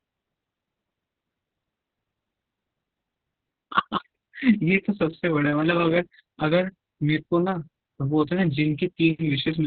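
From start to finish the speech carries heavy Opus voice compression. Everything above about 4 kHz is gone, and the excitation is coded very coarsely, leaving the speech muffled, hoarse and a bit robotic, which fits the narrowband SILK mode at a rate around 6 kbps.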